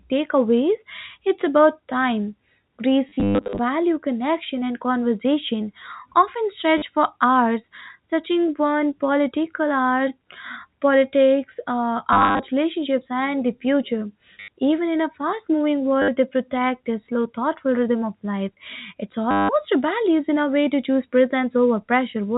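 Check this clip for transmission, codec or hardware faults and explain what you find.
The clip has one kind of fault: packet loss with last packet repeated, occurring six times in this speech. Packets failed to arrive, and the receiver filled each gap by replaying the last good packet until new ones came. The gaps fall at 3.09 to 3.59 s (scattered, with runs up to 120 ms), 6.78 to 6.82 s between "connection and conversation often" and "for hours touching one", 12.13 to 12.39 s, 14.40 to 14.48 s, 16.02 to 16.08 s after "in a fast moving", and 19.31 to 19.49 s just before "rebellious in a way". The lengths of the gaps fit 10 ms packets, so the longer runs buzz at about 100 Hz. The result is a brief robotic stutter. The G.711 telephone coding, which passes nothing above 4 kHz, is heard as ordinary narrowband telephone sound.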